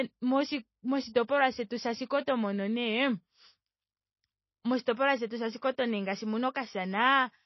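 It's a speech clip, and the whole thing sounds heavily squeezed. Nothing comes through above 5.8 kHz, so the top end is simply gone, and the damage is plainly audible throughout: a watery, swirly texture where quieter detail flickers in and out, and sibilants going a bit metallic. That's likely MP3 compression, and a cutoff that low with that much swirl fits a very low bitrate, something around 24 kbps. At that rate the encoder drops the treble wholesale and zeroes weak frequency components frame by frame. There's also a pre-echo from about 4.81 to 4.87 s, roughly 52 ms of hiss sneaking in just ahead of a sharp onset. The codec spreads its quantisation noise across the whole transform block, so noise sized for the loud attack leaks into the quiet moment before it. That leaves the attack sounding softened and smeared rather than crisp.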